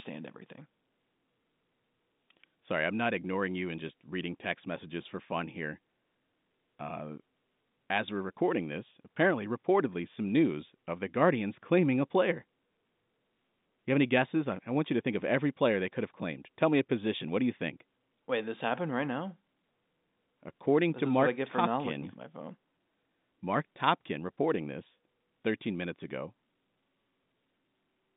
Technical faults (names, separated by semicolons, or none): none